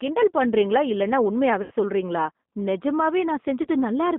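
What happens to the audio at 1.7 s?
Right after "கிண்டல் பண்றீங்களா இல்லைனா", from about 1.62 to 1.73 s, there's VoIP packet loss concealed by the speech codec. Around 90 ms of audio went missing, consistent with three dropped packets, and the decoder papered over it by stretching its last pitch and filter, so you hear a fading smear instead of real sound.

That stretch also sits inside the G.729 codec coloring the whole clip. It's an 8 kbit/s coder that rebuilds speech from a filter, a pitch predictor and a few pulses. The line passes only about 200 Hz to 3.6 kHz, and the rough, synthetic texture is plainly audible.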